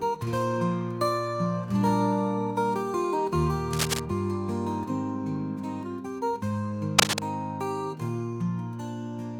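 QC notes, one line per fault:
3.73–4.00 s and 6.98–7.22 s, cable scratch noise: likely a worn cable, connector or control being moved, so its contact resistance jumps about rapidly and adds dense, uneven bursts of noise to the signal. Each event lasts about a quarter of a second and is heard as scratching and rustling laid over the sound. The first burst sits at roughly the same level as the sound; the second is somewhat louder than it.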